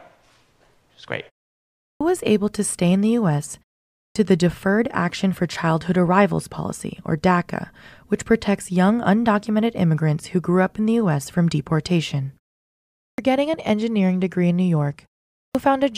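At 1.79 s, 3.93 s, 12.95 s and 15.35 s there's a clipped start after a pause. The output device dozes off in the short gaps and takes about 0.2 s to wake, so the speech after "was great" and the opening of "getting an engineering degree" jump in abruptly, missing their first sounds.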